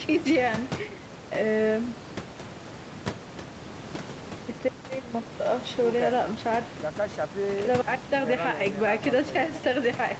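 Nothing stood out on listening to this speech recording, which has room noise about 10 dB below the speech and the limited top end typical of a call.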